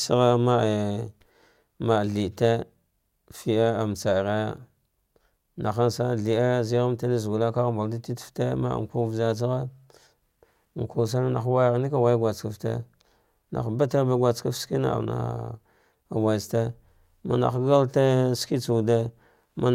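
Nothing goes wrong anywhere in this bit of speech, so there's simply no fault to point out at any moment.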